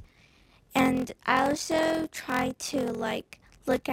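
A block size mismatch (padded) runs through the whole of this roughly 4-second audio clip. One stage is handing over shorter blocks than the next stage reads, which fits 1024-sample reads being filled from about 882-sample writes, with the shortfall padded with zeros. That silent gap in every block produces a steady buzz at 43.1 Hz, and the audio plays at 0.861 times normal speed while keeping roughly its original pitch.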